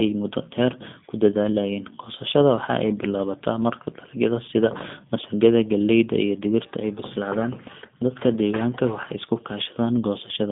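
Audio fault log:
Throughout, G.729 codec: a low-rate speech coder, consistent with 8 kbit/s G.729A, rebuilds the speech from a few pulses, leaving it plainly rough and synthetic, with nothing above 3.7 kHz.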